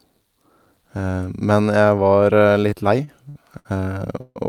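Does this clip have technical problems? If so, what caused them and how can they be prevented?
Yes. Repeated stalls (stutter) run from 2.61 to 3.67 s. Late packets kept emptying the jitter buffer, so five brief gaps, the longest 62 ms, were filled by stretching the last sound. A larger adaptive jitter buffer and a steadier network path would prevent it.

A call audio freeze at 4.21 s holds the sound as a fading buzz or hiss for about 150 ms, with about 20 ms of silence, then resumes with nothing lost. The likely cause is packets held up in transit, which let the buffer run dry. Prioritising voice traffic with QoS and avoiding congested links would prevent it.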